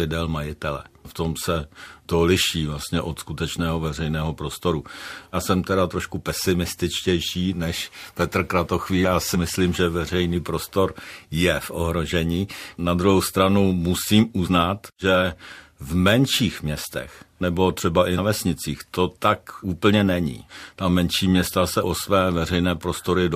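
At 14.46 to 14.48 s, between "druhou stranu musím" and "že v menších městech", the speech jumps forward by roughly 70 ms, which points to about three compressed frames skipped. At 18.17 s, just after "městech nebo třeba i", a shorter jump of about 50 ms suggests two frames were lost. In both places the decoder never played whole frames, so the audio leaps ahead.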